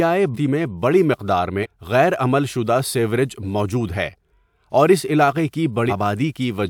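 Compressed frames are skipped at 0.34–0.37 s (just before "میں بڑی مقدار"), 1.62–1.66 s (just before "غیر عمل") and 5.89–5.93 s. The speech jumps ahead roughly half a second, 150 ms and 300 ms, each a whole number of 42.7 ms frames. The spectrogram shows abrupt harmonic breaks and the waveform shows sudden envelope shifts.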